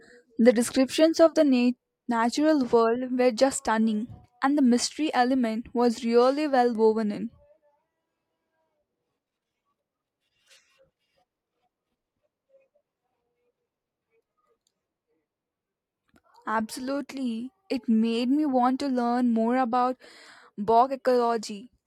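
Nothing in this recording trips a technical fault, so there's no problem here to point at or explain.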